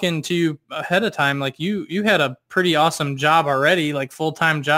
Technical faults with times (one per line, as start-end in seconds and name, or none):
0.00-4.78 crude rate conversion